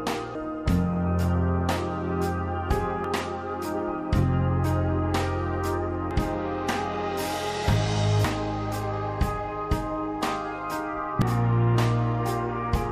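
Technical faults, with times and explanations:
0.35, 3.04, 6.11, 8.25 and 11.22 s, damaged data in a compressed stream: corrupted bytes make the decoder misread frames and lose sync, producing brief chirps or blips.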